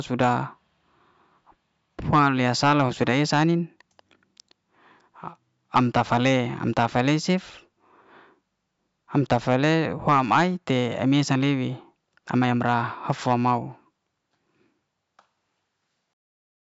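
No technical faults can be heard anywhere in this recording.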